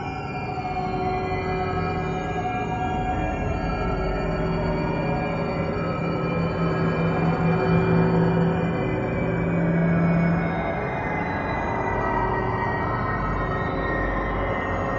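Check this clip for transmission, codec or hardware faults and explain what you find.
No transmission, codec or hardware fault is audible anywhere in the clip.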